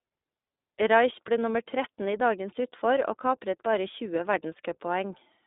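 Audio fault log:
Throughout, iLBC codec: speech sits in a 250 Hz to 3.7 kHz telephone band with nothing above 3.8 kHz. Each 20 ms frame is coded independently, adding a plainly rough, synthetic grain that simple band-limiting wouldn't. This fits the 15.2 kbps mode.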